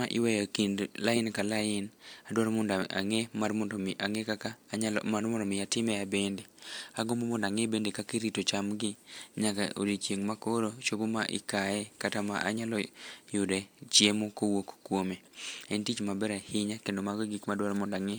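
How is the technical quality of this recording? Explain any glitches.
Nothing stood out as a problem on listening to this recording.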